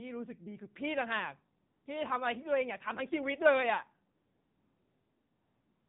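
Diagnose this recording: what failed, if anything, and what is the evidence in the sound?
The codec stage failed: the speech went through the AMR narrowband mobile codec, and the degree of damage points to a low mode such as 7.4 kbps. Nothing above 4 kHz survives, and the speech is plainly buzzy and synthetic throughout, as the sparse pulse excitation rebuilds the voice.

Discontinuous transmission in the call processing also marks the pauses. AMR comfort noise replaces the real background from 1.66 to 1.86 s, a 200 ms gap, and again from 4.16 s to the end, about 1.7 s. Each time, smooth, steady synthetic noise switches in where transmitted frames stopped.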